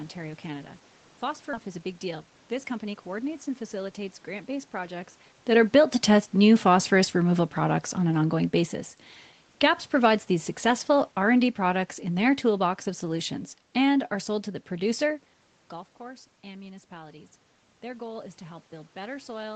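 At 1.53 s the speech jumps abruptly forward, with the two sides butted together and no gap or fill between them. This is a skip ahead: later audio was already queued, and a stretch was dropped either on the way or by the jitter buffer when it overflowed. Roughly 0.4 s of speech is gone, and the delay through the call path shrinks by the same amount at that instant.

Immediately afterwards, from 1.63 to 3.29 s, the talking sounds hurried and clipped in rhythm while its pitch stays unchanged, running at about 110 % of normal speed. That is jitter buffer speed-up. The buffer was still holding more audio than its target, so the receiver kept cutting out tiny pitch-period-sized slices, trimming around a fifth of a second in total to pull the latency back down.

From 9.49 to 14.22 s the level sinks steadily, and the background noise drops right along with the speech, by about 6 dB overall. This is automatic gain falling. 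The gain control judged the input too hot and eased its gain down gradually. Because the whole signal moves together, room noise included, this is the control at work and not the talker backing away.

From 15.99 to 19.51 s the opposite happens. After the talker moves away from the microphone around 15 s, the incoming level has dropped by about 16 dB, and speech and background then swell back together by about 5 dB. This is automatic gain rising. The gain control reacted to the quieter input by slowly raising its gain, recovering only part of the loss over those three and a half seconds.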